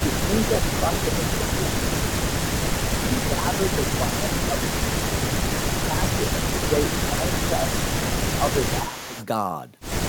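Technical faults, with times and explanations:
0.0–2.23 s, 3.07–4.92 s and 5.68–9.15 s: speech suppressed in double talk. Speech dips by about 10 dB in patches, likely an echo canceller ducking both talkers at once; the waveform shows notched, gated envelopes.
2.47–3.26 s and 3.9–9.26 s: echo leak. A copy of the speech trails 300 ms behind at about 15 dB down, likely from loudspeaker pickup; the spectrogram shows faint, time-shifted duplicate harmonics.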